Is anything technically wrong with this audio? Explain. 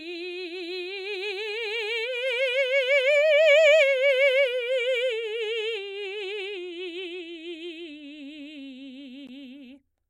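Yes. At 9.27 s there is a gap at a join of encoded pieces: separately encoded 10 s segments were joined untrimmed, leaving about 14 ms of silence. The music resumes where it stopped, with smeared edges, unlike a dropout.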